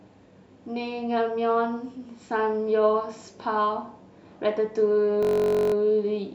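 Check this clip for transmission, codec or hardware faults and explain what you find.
One fault, near the end of this speech clip. From 5.23 to 5.74 s the sound becomes a steady buzz at 46.9 Hz, a single 21.33 ms fragment repeating exactly 24 times. This is a system hang loop. The computer or driver stalled while the sound hardware kept replaying one ring buffer, whose length fits a 1024-sample buffer. When playback resumes, essentially no audio seems to have been skipped.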